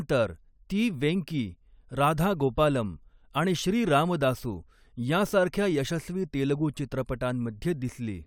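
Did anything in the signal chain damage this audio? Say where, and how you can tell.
No, nothing along the signal chain has left an audible mark on this speech, and the signal holds steady, continuous and intact throughout.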